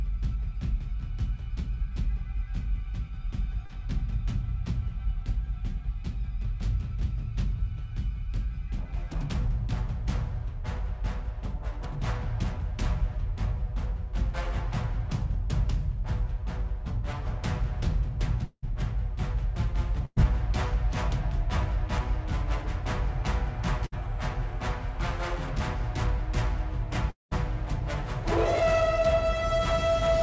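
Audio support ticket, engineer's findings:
Short concealed packet loss, 3.66–3.71 s: brief smear where about 40 ms never arrived; decoder extended the preceding sound, then blended back.

Long network dropout, 18.45–18.64 s and 27.10–27.33 s: fading buzz/hiss, then silence (about 50 ms, then 160 ms). Audio resumes with about 180 ms and 220 ms lost. Likely network outage.

Burst of packet loss, 20.05–20.18 s and 23.86–23.94 s: held, fading continuation. About 100 ms and 60 ms missing, the first ending in 30 ms of silence.

Call codec band-limited at 8 kHz, consistent with G.722 at 64 kbps.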